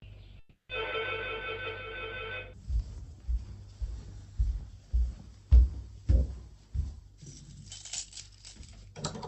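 A recording of everyday sounds with a gap near the start, most likely a long network dropout, from 0.39 s to 0.71 s. About 300 ms of audio is lost. The receiver stretches the last sound into a fading buzzy hiss, then falls to roughly 140 ms of near silence before the sound resumes with that stretch missing. On a spectrogram this shows as smeared, repetitive texture fading into an empty band. The waveform decays to a flat line. Throughout, the Opus call path at about 40 kbps cuts the spectrum off at 8 kHz.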